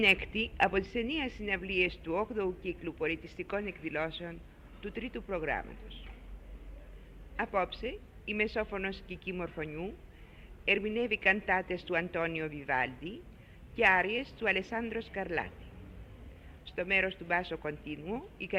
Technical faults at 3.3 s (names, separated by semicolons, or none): none